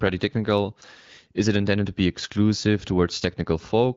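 Nothing's actually wrong here: it's a bit of speech coming through what sounds like an AMR wideband (HD Voice) call link, and there's no technical fault to point to.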